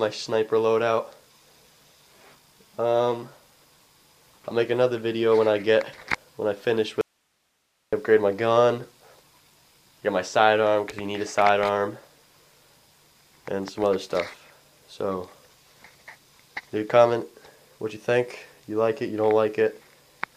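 From 7.01 to 7.93 s the sound cuts abruptly to faint hiss: an audio dropout to a faint residue, likely the source lost with the path still live.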